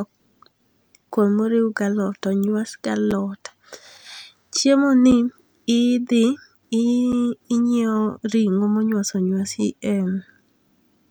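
A gap between chunks occurs at 1.1, 3.11, 5.11, 7.12 and 9.13 s: hard-edged 7 ms silences inserted every 2 s at chunk joins, with the speech intact rather than cut out as in a dropout.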